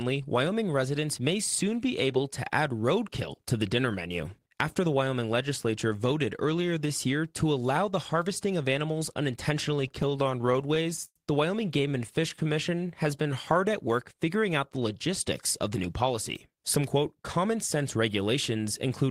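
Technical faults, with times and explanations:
9.88–11.16 s and 11.78–12.38 s, repeated stalls (stutter): late packets kept emptying the jitter buffer, so the last sound was stretched to fill gaps of up to 107 ms, and the speech drags and stutters.
12.44–13.53 s, jitter buffer slow-down, just before "at work figuring out": to rebuild its reserve the receiver repeated pitch periods, adding 101 ms, so speech runs at 92% speed with unchanged pitch.
15.67–17.55 s, jitter buffer speed-up, right after "figuring out the logistics": the buffer held excess delay, so short pitch-period pieces totalling around 150 ms were cut, and speech sounds hurried at 107% speed.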